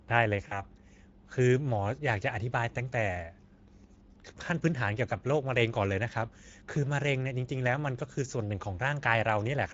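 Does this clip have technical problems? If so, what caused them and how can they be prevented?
Yes. Throughout, the speech sounds noisy and hoarse, with plainly audible Speex codec damage from coarse excitation coding, which fits a mid-quality setting near 16.8 kbps. A higher Speex quality or a modern codec like Opus prevents this.

From 0.47 to 0.62 s, the sound smears into a fading buzzy tone or coloured noise: VoIP packet loss concealed by the speech codec, which fits about 40 ms of lost packets, bridged by extrapolating the last pitch and filter. A jitter buffer, forward error correction or a steadier network path prevents this.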